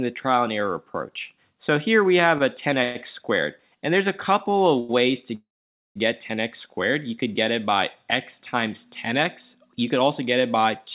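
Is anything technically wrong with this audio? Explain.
Yes. The sound passes through a narrowband call path, with nothing above 4 kHz, consistent with G.711 mu-law at 64 kbps. Three delivery faults break the timing.

Call audio freezes at 2.83 to 2.97 s and 5.35 to 5.97 s: these were likely caused by packets held up in transit, draining the jitter buffer. The receiver extends the last sound as a fading buzz or hiss, about 0.11 s in the first case. In the second, about 0.6 s, it decays to roughly half a second of silence. Playback then resumes where it stopped, so nothing is lost but the sound is pushed later.

A short stall from a late packet occurs at 4.80 to 4.91 s. One packet missed its slot, so the receiver stretched the preceding sound for about 92 ms until it arrived. That sound is held too long, with a slight buzz or dip, before continuing unbroken.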